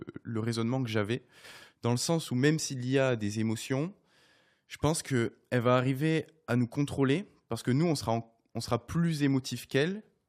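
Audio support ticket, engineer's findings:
No fault found on review of the speech recording. Nothing to escalate from this clip.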